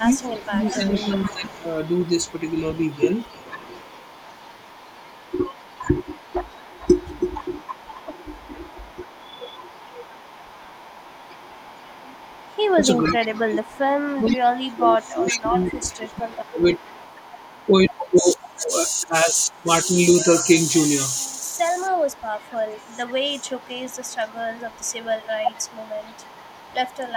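The speech carries an echo leak from 0.12 to 20.05 s and again from 20.69 s to the end. A faint copy of the voice returns about 460 ms late, roughly 20 dB below the direct speech in the first stretch and nearer 25 dB below in the second. The far end is likely playing the call over a loudspeaker, and its echo canceller is not removing everything its microphone picks up, so the residue is sent back. Speech suppressed in double talk appears at 0.0–1.52 s, 13.08–16.79 s, 18.58–19.68 s, 21.27–23.58 s and 25.42–25.83 s. In these spans the voice dips or drops out in pieces, by around 10 to 20 dB at its deepest. The longest losses are a few seconds within the 13.08 and 21.27 s spans, while the 18.58 and 25.42 s spans are only brief clips. This is likely the echo canceller failing to separate the talker from the loudspeaker echo while both sides speak at once, and attenuating everything.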